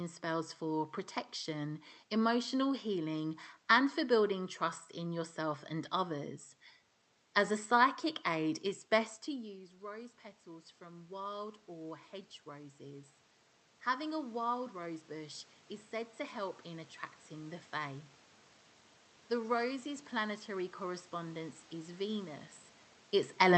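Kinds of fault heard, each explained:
Automatic gain rising: after the input fell by about 17 dB following "psychic aid it's best", the gain control slowly raised its gain by about 7 dB from 9.27 to 13.16 s and about 4 dB more from 13.84 to 17.62 s, so voice and room noise swell together.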